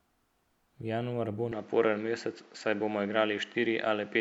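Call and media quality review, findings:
Speech turns duller from 1.52 s to end; nothing above 7.6 kHz, new background noise roughly 30 dB under the speech, level unchanged, no gap at the switch. Likely input switched to a poorer device whose narrower passband and own noise floor take over mid-recording.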